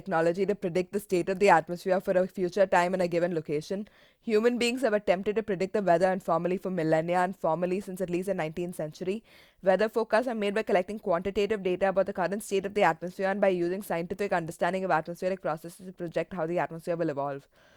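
No audible technical faults turn up anywhere in this recording.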